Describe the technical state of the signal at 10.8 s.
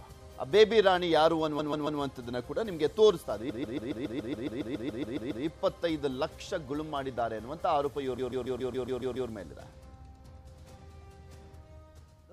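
At 10.8 s the signal is intact, with no audible fault at that point.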